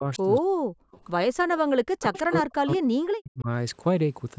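From 0.00 to 0.21 s and again from 0.39 to 1.00 s, the speech dips, by about 15 dB at first and then by about 40 dB. On the waveform the envelope collapses in patches, and on the spectrogram the upper bands vanish. This is speech suppressed in double talk, likely an echo canceller ducking the near talker while the far side also spoke.

At 1.56 to 1.60 s a faint echo leak appears, likely residual loudspeaker pickup the canceller missed, returning 187 ms late at roughly 25 dB below the speech. It shows as a faint repeat of earlier spectral patterns.

Suppression returns from 1.74 to 3.48 s, with gaps as deep as about 40 dB. Inside that stretch, from 2.01 to 2.34 s, a stronger echo leaks through, again 187 ms behind and roughly 15 dB down.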